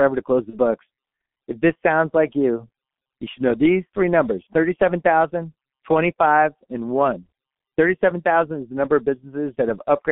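Speech, coded throughout with the G.723.1 codec at heavy damage: the band is confined to roughly 200 Hz to 3.4 kHz, and the slow-updating low-rate voice model, consistent with about 6.3 kbit/s, leaves the voice muffled and hoarse with smeared consonants. From 0.50 to 0.58 s there is VoIP packet loss concealed by the speech codec. About 30 ms of audio is missing, which fits a single lost 30 ms frame. The decoder extrapolates its last pitch and filter with falling gain, giving a brief stretched, fading sound before the voice recovers.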